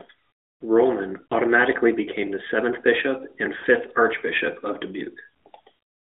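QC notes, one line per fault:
1.26–1.34 s and 3.58–3.64 s, lost AMR speech frames: a brief smeared, fading dip of about 40 ms before "became the seventh bishop" and between "the seventh bishop and" and "archbishop of". That length fits two dropped 20 ms frames, which the decoder filled by repeating its last good pitch and vocal-tract settings at falling gain within the narrowband phone-band sound.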